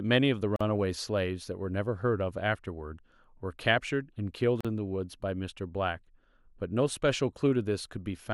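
At 0.56 to 0.61 s and again at 4.61 to 4.65 s, the speech drops out for about 44 ms and then 40 ms, four seconds apart: a gap at a join of encoded pieces. Separately encoded segments were spliced with their encoder start delay and final-frame padding left in, so silence opens mid-sound. On a waveform each appears as a flat stretch with smeared edges. On a spectrogram it is a narrow vertical blank band before the speech resumes where it stopped.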